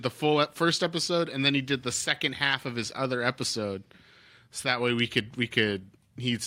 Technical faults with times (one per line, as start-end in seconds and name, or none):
none